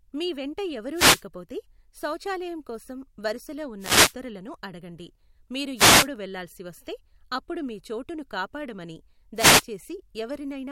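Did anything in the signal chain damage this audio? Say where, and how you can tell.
Yes. A wireless microphone noise hit occurs at 0.93–1.23 s after "మీ వెంట", at 3.79–4.14 s after "శౌచాలయం కోసం వరుసలో", at 5.75–6.09 s before "వెళ్ళాల్సి వస్తే అప్పుడు మీ", and at 9.35–9.65 s. Each is a burst of static, about a third of a second long, swishing over the speech. The damage is in the analogue radio link, ahead of the converter. Reflections cancel the FM carrier, so the receiver's own noise surges up and masks the signal until reception recovers.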